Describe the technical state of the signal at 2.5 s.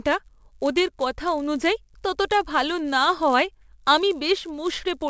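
At 2.5 s you're right in the middle of a fault that runs the whole way through: the resampler restarted on every block. Each chunk of about 10 ms was converted on its own, so the filter at every edge saw nothing, or the wrong end of the block, instead of its real neighbours. Those edge errors land 100 times a second, which turns into a steady 100 Hz buzz riding under the speech. The pattern fits a 44.1 kHz to 16 kHz conversion.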